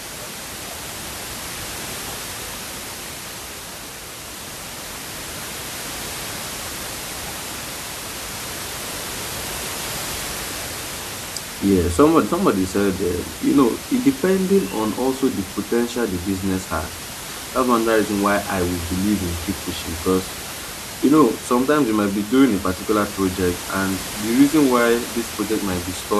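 Speech recording with no technical faults; the room's background noise sits about 11 dB below the speech and belongs to the recording itself, not the signal chain.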